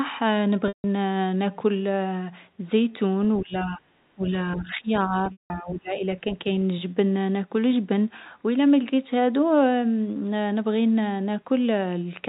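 At 0.68 s there is packet loss with pitch repetition. About 160 ms of audio goes missing. The receiver repeats the last pitch period, so the speech holds and buzzes briefly. The repeat then fades to silence before the speech returns.

From 3.40 to 3.86 s the talker drops by roughly 20 dB. From 4.15 to 6.23 s a shallower dip of about 10 dB follows. This is likely speech suppressed in double talk. The echo canceller mistakes overlapping speech for echo and turns it down.

At 5.32 s, inside that dip, packet loss strikes again. About 180 ms is lost. The same buzzy repeated period fades into silence. The speech then cross-fades back in. Throughout, the G.711 A-law telephone band stops at 4 kHz.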